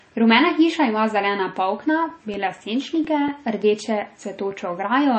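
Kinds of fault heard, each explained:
Low-bitrate audio saved at a high bitrate: likely an MP3 from a very low bitrate re-saved at a high one, so its smeared artefacts remain and nothing sounds above 8.4 kHz.
CD scratch ticks: damaged disc data beyond error correction is patched or muted each rotation, giving eight brief ticks of a few milliseconds from 1.87 to 3.52 s, after "hiša ima zelena".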